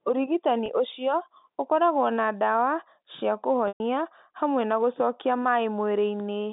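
Packet loss with pitch repetition at 0.66–0.68 s, before "ũcio ũkoragwo na ndawa", leaves a brief held buzz, a 20 ms gap consistent with one lost packet. At 3.68–3.80 s, between "ũkoragwo na ndawa cia" and "hamwe na gũcokia", a 120 ms gap, fitting about six packets, is bridged by a repeated pitch cycle that fades to silence. On a waveform this shows as identical repeating periods decaying in amplitude. On a spectrogram it appears as frozen, evenly spaced harmonics that thin away.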